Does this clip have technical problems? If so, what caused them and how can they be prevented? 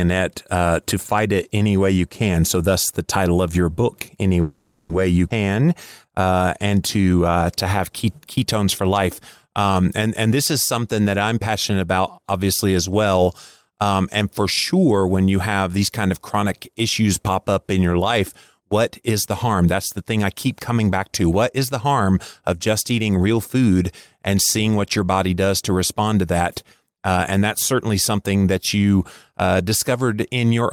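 Yes. From 4.41 to 4.91 s the speech stops moving forward for about half a second. The last sound is stretched into a fading continuation rather than true silence, and then the talker resumes exactly where they left off, with nothing lost. This is the signature of a call audio freeze, likely caused by packets stalling in transit until the jitter buffer emptied and the receiver had to fill 480 ms on its own. A larger or adaptive jitter buffer, or a more stable network path, would prevent it.

At 5.29–5.32 s there is a skip ahead. Playback leaps forward with only about 10 ms of filler, so roughly 100 ms of speech is cut out and the two sides are butted together. A stretch of audio was dropped, either in transit or by the jitter buffer when it overflowed, while later audio was already waiting. Gradual time compression instead of dropping whole blocks would prevent this jump.

Just before "and to uh to", from 5.45 to 6.43 s, the speech runs at 89% speed with unchanged pitch, drawing sounds out by 118 ms in total. 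This is a jitter buffer slow-down: the receiver repeated single pitch periods many times to rebuild its reserve. Tuning the buffer to rebuild depth more gently, or avoiding the preceding underrun, would prevent it.

Two jitter buffer speed-ups follow. At 18.58–18.69 s, right after "up in your life", a brief burst runs at 159%, with roughly 70 ms removed. From 19.11 to 23.38 s, after "in your life what" and ending before "food and seeing what", the speech is slightly hurried at 109%, with about 400 ms trimmed overall. In both cases the receiver cut short pitch-period pieces to shed excess buffered delay. Smoother delay targeting and less bursty packet delivery would prevent both.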